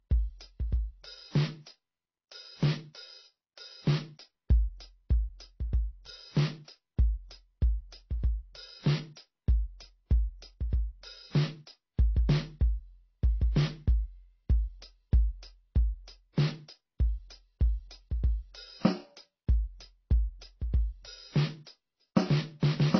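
Transcoding between lossy codecs affects this music for its whole length. Nothing is heard above about 6.2 kHz, and the dull, smeared texture layers several kinds of coding damage at once, which likely comes from a chain of low-bitrate MP3 and HE-AAC encodes finishing in AAC-LC. Each later encoder spent its small bit budget re-coding the earlier artefacts while adding its own, and the lowest bandwidth limit in the chain carried through to the end.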